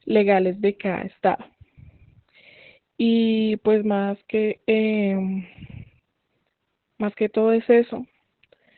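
From start to end the speech carries heavy Opus voice compression: the SILK coder at a rate that sounds like about 8 kbps, narrowband, with nothing above roughly 4.3 kHz. The narrow band and coarsely coded excitation make the speech muffled, hoarse and slightly robotic throughout.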